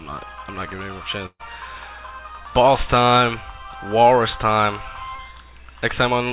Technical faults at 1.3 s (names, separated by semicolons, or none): burst of packet loss